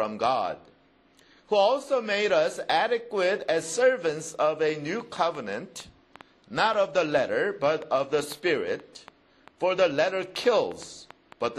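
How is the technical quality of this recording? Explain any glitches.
The recording has one clear technical problem, a train of clicks running from 4.69 s to 11.45 s. Around thirty sharp, near-identical pulses arrive at roughly four per second, spaced unevenly, peaking a few decibels above the sound and ticking through pauses too. The likely cause is electrical interference or a faulty connection or power supply injecting spikes into the signal. Unlike random crackle, these clicks keep the same shape, which points to one repeating source.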